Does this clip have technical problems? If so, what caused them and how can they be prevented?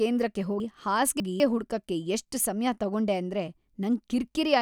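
Yes. Between 0.6 and 1.4 s, just before "ಹುಡ್ಕಕೆ ಎಷ್ಟ್ ಸಮ್ಯ ತಗೊಂಡೆ", the speech jumbles. These are chunks out of order: a 200 ms chunk plays three chunks late, leaving three hard joins. Unlike a dropout, nothing is missing; the sound is only rearranged. Numbering chunks and reordering them in a buffer before playback prevents this.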